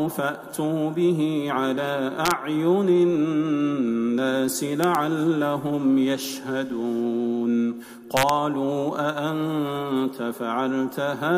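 Integer overflow occurs at 2.26 to 2.31 s, 4.84 to 4.95 s and 8.17 to 8.29 s. Peaks overdriven by about 0 to 1 dB wrapped to the opposite sign instead of limiting, producing sharp cracks.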